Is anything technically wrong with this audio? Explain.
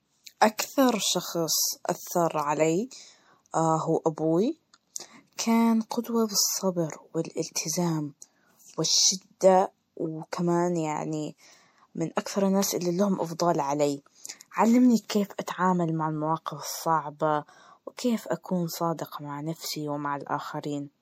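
Yes. Throughout the speech, MP3 compression damage is plainly audible, likely from an encoder starved at around 64 kbps. The treble is cut and weak components flicker, giving a watery swirl; a spectrogram shows a flat high-frequency ceiling and speckled gaps.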